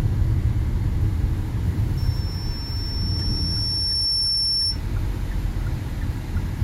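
From 1.97 s to 4.82 s, a microphone picks up the loudspeaker it is feeding, and at 5.4 kHz the round trip through the loop gains more than it loses, producing loudspeaker feedback squeal. That single frequency feeds on itself, so a thin, piercing tone rises out of the sound over about two seconds until it is roughly as loud as the material itself. It holds there until it stops at 4.82 s.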